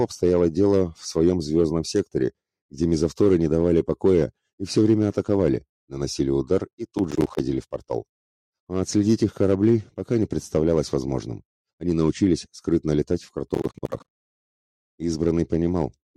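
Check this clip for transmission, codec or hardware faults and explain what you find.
Two bursts of processor overload crackle, at 6.71–7.40 s and 13.48–14.36 s. The processor misses many audio-buffer deadlines in a row. Each miss drops a block of about 10 ms to silence with hard edges, producing gritty, tearing crackle. The second burst is denser.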